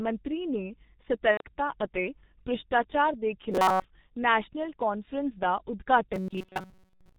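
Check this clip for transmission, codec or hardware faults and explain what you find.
Three faults are present: a low-bitrate codec across the whole clip, one concealed packet loss, and two stretches of robotic buzz.

The G.723.1 codec damage runs throughout. The speech is coded at about 6.3 kbit/s in 30 ms frames. Nothing above 4 kHz survives. The voice model updates slowly, so the sound is heavily muffled and hoarse. Consonants smear into one another.

VoIP packet loss concealed by the speech codec occurs from 1.31 to 1.42 s. About 90 ms of audio went missing, which fits three lost 30 ms frames. The decoder filled the gap by extending its last pitch and filter while turning the gain down. The result is a brief stretched, fading sound that is muted by the third lost frame. Because each frame depends on the one before, the speech stays weak for a short while after the gap.

Robotic sound from repeated short buffers appears from 3.52 to 3.85 s and again from 6.14 s to the end. 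Here the sound becomes a rigid metallic buzz at about 188 Hz. This is likely caused by audio arriving too seldom, so the last few milliseconds are replayed to fill the time. A 188 Hz buzz fits a repeated segment of about 5.3 ms. Most of the real audio in these stretches is skipped. The buzz still loosely follows the speech.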